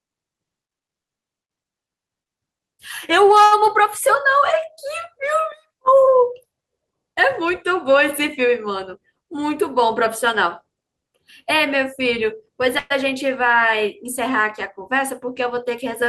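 At 3.44 s there is a short stall from a late packet, lasting until 3.53 s. A packet missed its slot and the jitter buffer emptied. The last sound is stretched for 72 ms, then resumes where it stopped. Nothing is lost, but the sound hangs with a faint buzz or dip.

From 8.99 s to 9.57 s comes a jitter buffer speed-up. Too much audio had built up in the buffer. Short pitch-period slices were cut repeatedly, removing about 50 ms. Playback runs at 107% speed with unchanged pitch, so it sounds slightly hurried.

At 12.79 s a call audio freeze begins, ending at 12.92 s. The last sound is held as a buzz or hiss that fades for 116 ms without dropping to silence. Then the audio continues from the same point. Packets were likely held up in transit, draining the buffer.

A second jitter buffer speed-up runs from 15.24 s to 16.02 s. Again about 50 ms is trimmed in small pitch-sized pieces. The pace rises to 106% at the same pitch, and the rush is audible.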